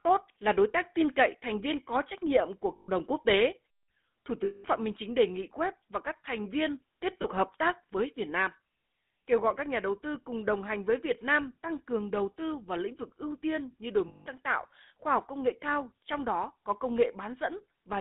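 GSM full-rate codec damage runs through the whole recording: the speech is squeezed into roughly 200 Hz to 3.6 kHz, and a vocal-tract model excited by sparse, regular pulses gives a plainly audible buzzy, gravelly roughness, consistent with 13 kbps GSM coding.

Lost GSM frames occur at 2.76 to 2.89 s, 4.44 to 4.65 s, 7.22 to 7.25 s and 14.08 to 14.27 s, lasting 120, 200, 20 and 180 ms. Each gap is concealed by repeating the last good frame, producing a brief rough, metallic ring.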